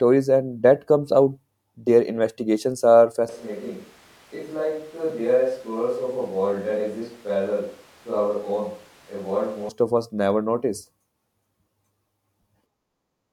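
At 3.29 s the sound suddenly goes roomy and hollow, thinner in the low end and around 10 dB quieter, with room noise rising to roughly 25 dB below the speech. It's likely a switch to a distant microphone, and it snaps back at 9.69 s.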